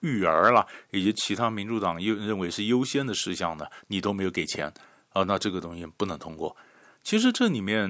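Speech through call microphone processing, with nothing technically wrong.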